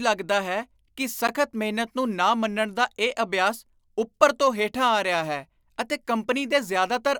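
At 1.27 s, between "ਹੈ ਕਿ" and "ਮਿਹਨਤ ਨੂੰ ਨਾ ਮੰਨਣ", a gap between stream segments inserts roughly 12 ms of silence, visible as a hard-edged flat line in the waveform and a thin vertical blank stripe on the spectrogram.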